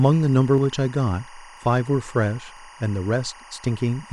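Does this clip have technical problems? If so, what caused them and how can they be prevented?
Yes, two. Timecode bleed runs the whole way through: a chirpy warble sitting roughly 25 dB under the speech, flipping between tones around 1 kHz and 2 kHz at a 24-frame rate, which is linear timecode leaking over from a neighbouring track or cable. Keep timecode lines physically apart from audio runs and use balanced, well-shielded cabling.

There are also short skips at 0.58, 1.57, 2.57 and 3.56 s, each dropping only a few milliseconds and butted straight together. The steady one-second spacing points to audio missing between chunks, likely lost while the recorder closes one block and opens the next. Use a recorder or processing chain that hands off buffers seamlessly, with overlap or double buffering.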